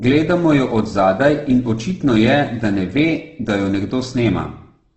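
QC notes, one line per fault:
Throughout: Opus compression. The speech sounds rough and grainy, with the harmonic structure of voiced sounds turned noisy. Nothing is present above 8.2 kHz, which gives a dull, narrowed top end. This likely comes from Opus in its music mode at a very low bitrate, around 12 kbps, filling starved bands with noise. On a spectrogram there is a hard ceiling at 8.2 kHz and smeared, speckled harmonics below it, with few empty holes.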